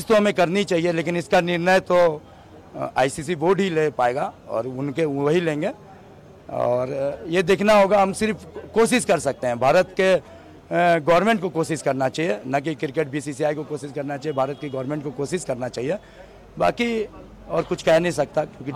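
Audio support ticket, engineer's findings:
No technical faults found on review; the signal path shows nothing requiring action at any point in the recording.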